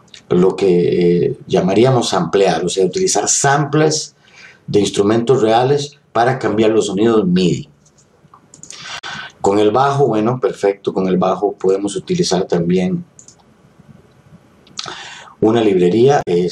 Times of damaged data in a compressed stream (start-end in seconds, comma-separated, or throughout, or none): 8.97-9.04, 16.21-16.28